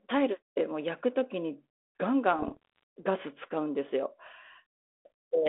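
It's a speech clip carried over what sounds like 32 kbit/s G.726 ADPCM with a 300 to 3600 Hz line band, and from 2.36 to 2.83 s there are bit errors on the ADPCM link. You hear pops and rough, gritty bursts with brief level jumps. Each flipped bit throws off the decoder's step size and prediction, so the damage rings on for a few milliseconds. The error rate sounds well under one percent.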